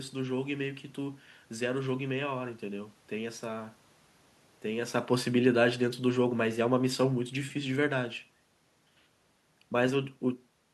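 From 5.1 s to 8.02 s the automatic gain control judges the input too loud or its background noise too strong, and lowers its gain gradually, by about 4 dB in all. Because the gain acts on everything the microphone picks up, the speech and the room noise sink together. This drop is not just the voice fading on its own. That sets this automatic gain falling apart from the talker moving at the microphone around 5 seconds, which changes only the voice level.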